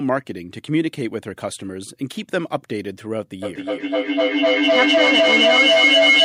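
From 3.42 s to 6.24 s, feedback echo between two devices loops the sound back roughly every 300 ms, thinner and ringing, swelling to about 8 dB above the speech rather than dying away.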